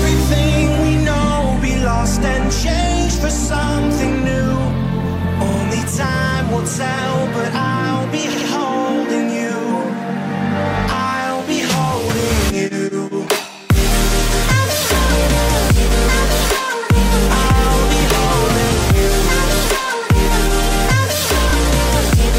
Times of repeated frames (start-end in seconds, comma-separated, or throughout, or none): 5.48-5.58, 8.32-8.48